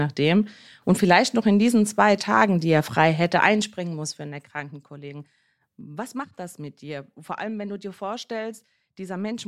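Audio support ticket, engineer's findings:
Zipper noise, 3.38–4.92 s: gain drops about 15 dB in unsmoothed 2 dB steps, roughly seven per second, each ticking. Probable component: gain stage without ramping.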